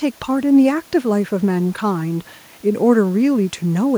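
Nothing's technically wrong with this speech recording; the only extra sound is the room's own background noise, sitting about 33 dB below the talking.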